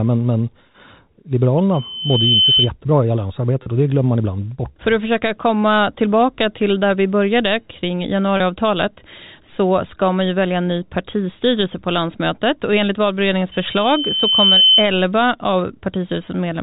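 Speech over a G.711 telephone-band path has two faults. Loudspeaker feedback squeal appears from 1.73 to 2.71 s and again from 13.5 to 14.9 s: a single tone at 3.1 kHz swells over somewhere under a second to roughly a second, to about 5 dB above the speech. The microphone is picking up its own loudspeaker, with loop gain exceeding unity at that frequency. Packet loss with pitch repetition occurs at 3.63 to 3.66 s and 8.37 to 8.40 s. Each 30 ms gap, which fits a single lost packet, is bridged by repeating the last pitch period, so the sound briefly holds with a buzzy quality before normal audio resumes.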